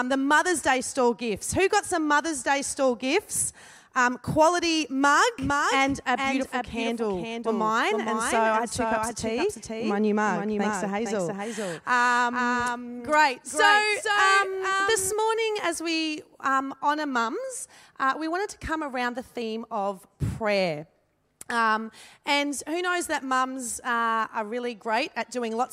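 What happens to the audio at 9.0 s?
At 9.0 s a doubled audio track is present, running 5.39 to 15.13 s: a full-band copy about 5 dB quieter trails roughly half a second behind, likely from a slower second capture path.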